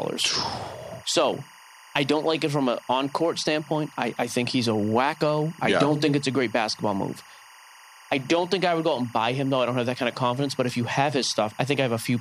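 A steady chirping warble sits behind the speech for the whole clip, roughly 25 dB below it, flicking between tones near 1 kHz and 2 kHz. This is timecode bleed: linear timecode running at 23.976 frames per second has leaked in from an adjacent track or cable.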